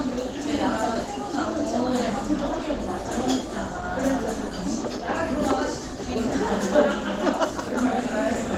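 Likely low-bitrate Opus compression throughout this recording of everyday sounds, with the encoder in its hybrid speech mode, which fits a rate around 16 kbps: the full bandwidth survives, but the sound comes out plainly muffled, hoarse and grainy, with tonal parts turned rough and noisy.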